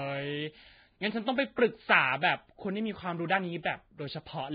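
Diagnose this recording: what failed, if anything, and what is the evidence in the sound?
The failure is at the codec stage, and it's most likely Vorbis compression pushed to a very low bitrate, somewhere around 16 kbps. Throughout the speech the top end stops dead at about 4.9 kHz, and what's left of the upper band sounds hissy and grainy, with heavy codec damage. Vorbis sends a smooth spectral floor plus a quantised residue. At this rate the treble detail is quantised so coarsely it turns into noise of about the same energy.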